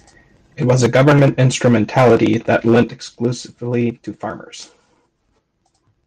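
Microphone overload runs from 0.69 to 2.24 s. The loudest syllables are flattened at the converter's ceiling, driven about 8 dB past it, with roughly 7 percent of the samples clipped. This gives a harsh, crackling edge that is likely caused by the input volume being set too high. At 0.86 s, partway through that stretch, the microphone volume steps down by 4 dB. Speech and background both drop abruptly, likely the call software cutting the input level once it detected clipping.

Microphone overload returns from 2.53 to 2.83 s, about 5 dB over the limit and again with roughly 7 percent of samples clipped, so the peaks crackle and sound squared off. At 2.88 s, just after it, the microphone volume steps down by a larger 8 dB. A final step down of 4 dB follows at 3.9 s, and the level falls suddenly once more.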